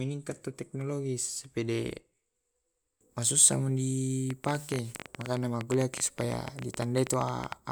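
From 4.30 s to 7.53 s a train of clicks runs over the speech. Around forty near-identical pulses arrive at an uneven pace, roughly 11.8 per second. They tick and pop through pauses too, well above the speech level. Interference from nearby equipment is the likely cause.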